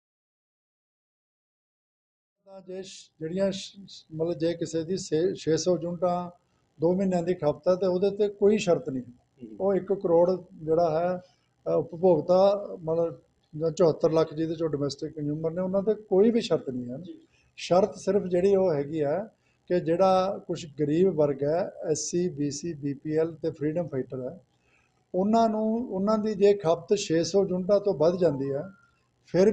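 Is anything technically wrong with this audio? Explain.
No, nothing technically wrong can be heard here.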